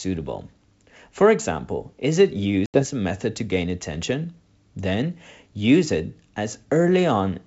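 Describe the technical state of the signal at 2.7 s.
At 2.7 s you're inside a stretch of packet loss on the ADPCM call, from about 2.66 to 2.83 s. Around 80 ms of speech drops out as a hard-edged silent gap, roughly four packets' worth. When the G.722 wideband sound resumes, the decoder's predictor and step size are out of sync with the sender's, so it comes back slightly distorted before settling.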